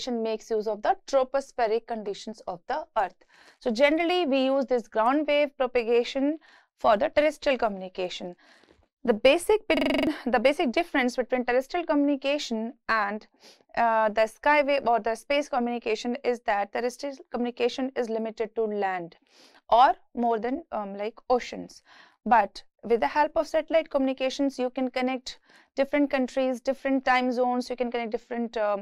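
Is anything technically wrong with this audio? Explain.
Yes. From 9.77 to 10.07 s there is a system hang loop. The system froze while the sound hardware kept replaying one 42.67 ms buffer, which fits a 2048-sample buffer. It repeats 7 times at 23.4 Hz, a rapid rattling stutter. Roughly a third of a second of audio is lost.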